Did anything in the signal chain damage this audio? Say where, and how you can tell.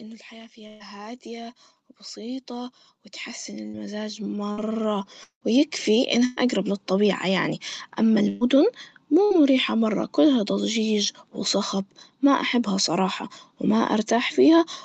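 Yes. The call's automatic gain control, part of the call processing stage, shows automatic gain rising from 0.54 s to about 6.1 s. Speech and background noise swell together over those several seconds, climbing by about 18 dB in total. Both rise together, so the change comes from the gain stage and not from the talker getting louder. The control judged the input too quiet and kept raising its gain slowly.

Bursts of packet loss on the network leg appear at 0.67, 3.68, 4.52, 6.25, 8.28 and 9.25 s. Each is a short concealment: the last sound is held and faded, so voiced speech becomes a brief buzz and other sounds a dying hiss. Speech then resumes further on. The events at 3.68, 4.52 and 9.25 s skip about 60 ms, and the others about 120 ms. That pattern fits whole packets being lost in runs, with the receiver filling the gap from what it last had.

At 5.23 to 5.44 s there is a longer break than any of the bursts, about 180 ms of missing audio. 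The concealment buzz fades out completely, and roughly a tenth of a second of silence follows before speech returns. This is likely a long network dropout, where nothing arrived for long enough that the receiver stopped extrapolating. Throughout, the Opus call path's 8 kHz ceiling limits the top end, as expected.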